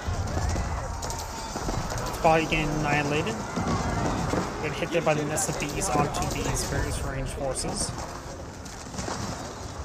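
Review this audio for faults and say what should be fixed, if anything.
Nothing here needs fixing, as no fault can be heard anywhere in the audio.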